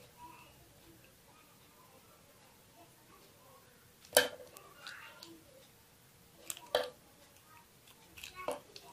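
A bit error spike occurs at 4.57 s. A single bit in the digital data flipped, briefly shifting the sample value by a power of two before it snapped back. Its brevity points to a corruption spanning only about three consecutive samples. The result is one sharp tick that sits across the whole spectrum and has no relation to the surrounding sound, an isolated click rather than anything shaped by the audio itself.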